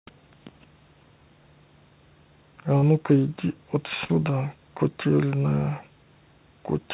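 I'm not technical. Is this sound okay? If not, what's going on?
No. Short concealed packet loss at 2.78 to 2.84 s: a scrap of the call arrived too late, so the receiver stretched the previous sound, leaving a brief smear. Burst of packet loss at 4.04 to 4.13 s: several pieces went missing together, so the last sound is held and fades, and a sliver of speech is skipped. The whole clip is also capped at 4 kHz, as on a phone line, which is normal for this call connection.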